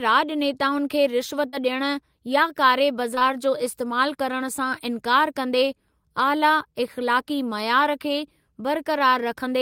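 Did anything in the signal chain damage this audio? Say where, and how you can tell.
Yes. Packets were lost on the network, causing short concealed packet loss at 1.49 to 1.55 s (about 40 ms) and at 3.15 to 3.23 s (two 20 ms gaps back to back). The receiver bridged each hole by extending the preceding speech, heard as a brief smear before the real audio returns.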